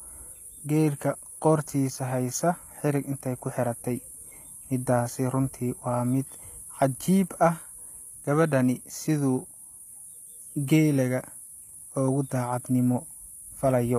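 HE-AAC compression, present throughout the speech: the treble above the low band sounds synthetic, with sibilants turning gritty and metallic, and nothing reaches past 15.5 kHz. The likely cause is spectral band replication, where only the lower spectrum is coded and the upper region is rebuilt from copied lower bands under a coarse envelope, so its harmonics fail to align. The plainly audible damage points to a low bitrate, around 24 kbps.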